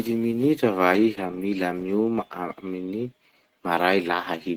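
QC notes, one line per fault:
throughout, Opus compression: the speech was likely encoded with Opus in its hybrid mode at a low rate that fits about 16 kbps. The lower band is modelled, not preserved, and the upper band is rebuilt from coarse energies, so the sound is plainly muffled, hoarse and grainy.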